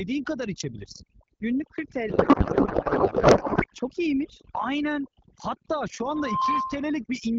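Across the whole recording, overdone noise removal was applied: a noise reduction stage set far too aggressively pulled individual frequency bands down or out whenever they came close to its noise estimate, taking the quieter parts of the speech with them. The pauses collapse into near silence dotted with twinkling specks. The underlying AMR-WB (HD Voice) link sounds clear, with only light coding damage.

From 2.09 to 3.66 s, a codec payload misread occurs. The receiver unpacked the AMR bits in the wrong layout, so valid-looking frames were decoded with their fields shifted out of place. The pattern fits octet-aligned packets being read as bandwidth-efficient. For that stretch the speech is replaced by garbled noise and warbling that barely tracks it, before normal decoding resumes.

From 5.99 to 6.97 s, a loudspeaker feedback squeal appears. A microphone picked up the loudspeaker it was driving, and at 1 kHz the loop gain rose above one, so that frequency fed on itself. 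A steady 1 kHz tone swells over roughly 0.4 s until it sits a few decibels above the speech, then holds as a piercing squeal until it cuts off.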